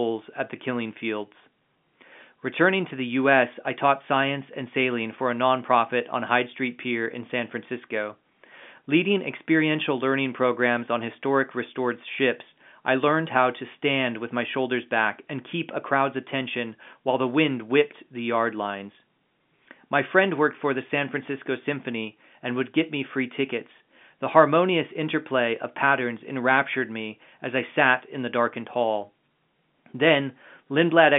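The speech comes through a standard telephone channel with G.711 A-law coding at 64 kbps, occupying roughly the 150 Hz to 3.5 kHz line band with nothing above 3.7 kHz and no technical faults anywhere in the recording.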